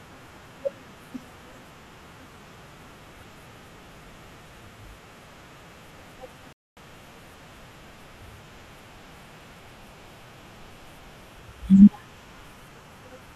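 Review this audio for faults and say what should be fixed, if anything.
At 6.53 s the speech halts in a rebuffering stall: the player ran dry of downloaded audio and sat silent until more data arrived, resuming at 6.77 s. The gap adds about 0.24 s to the running time. What separates it from a packet-loss dropout is that speech picks up exactly where it stopped, with no syllable missing, so the timeline stretches rather than skipping ahead. To prevent it, keep a deeper playback buffer or adapt the stream bitrate so downloads stay ahead of playback.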